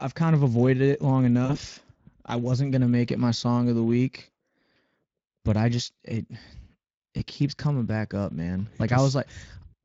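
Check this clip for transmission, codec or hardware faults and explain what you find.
There are two kinds of fault: Speex codec damage throughout the speech, and two dropouts patched by packet loss concealment.

The Speex codec damage runs the whole clip. The rate is roughly 20 kbps. CELP coding leaves the excitation short of bits. Speech sounds hoarse and grainy. Any band above 8 kHz is a noise-like fill rather than real detail.

VoIP packet loss concealed by the speech codec occurs twice. From 1.45 to 1.57 s, after "of avoided it long", about 40 ms went missing. The decoder extended its last pitch and filter with falling gain. It gives a buzzy or noisy, fading smear. At 7.17 to 7.23 s, before "keeps coming back up", a 20 ms gap gets the same brief treatment. Speech stays weak or distorted just afterwards.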